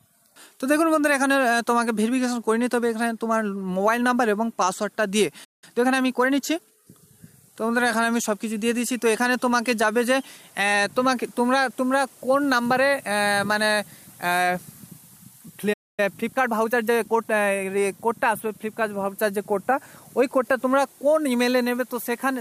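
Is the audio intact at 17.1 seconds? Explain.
No. From 16.00 to 17.66 s a time-compressed catch-up runs at about 1.15x, splicing out and cross-fading short segments, so the sound hurries at normal pitch.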